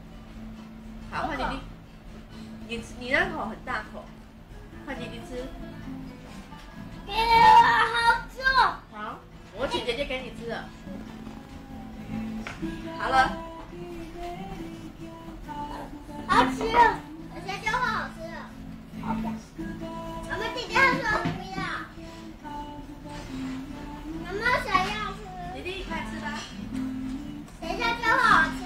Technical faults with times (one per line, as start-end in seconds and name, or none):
none